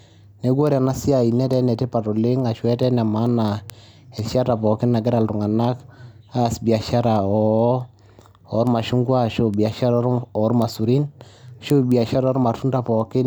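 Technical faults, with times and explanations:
0.24–13.21 s, word clock ticks: sharp clicks of uneven strength recur at a steady rate of roughly five a second, some seventy in all. The receiver runs on its own clock, drifting around 100 ppm from the sender's, so each slip drops or repeats one sample.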